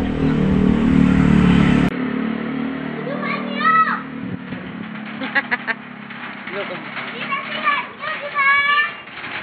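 Input switched to a poorer device at 1.89 s: a 20 ms gap, nothing above 4.4 kHz, slightly lower level, faint new noise, likely another input device.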